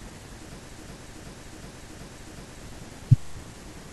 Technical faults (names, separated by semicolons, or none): system hang loop